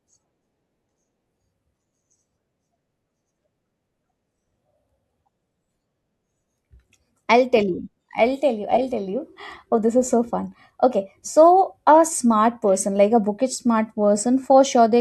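Nothing technical goes wrong anywhere in the recording, so there's no fault to point to in this bit of speech.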